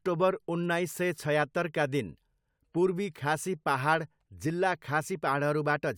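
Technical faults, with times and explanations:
Nothing stood out on listening to the speech here; no technical fault was heard at any point.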